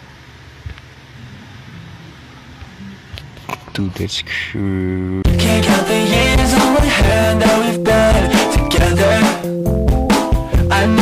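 Hard clipping runs through the whole clip. The signal is driven about 7 dB past the limit, flattening roughly a tenth of samples into a harsh fuzz.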